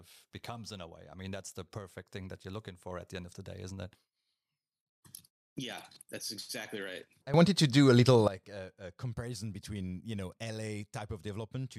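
At 7.34 s, just after "that's exactly right I", the speech undergoes a sudden gain jump of about 17 dB that lasts until 8.28 s, dropping back before "a comparison between you". The level changes between adjacent samples, likely because a gain setting was applied with no ramp. Unlike a speaker simply getting louder, the background noise steps up with the speech at the same instant, and the level changes abruptly rather than swelling.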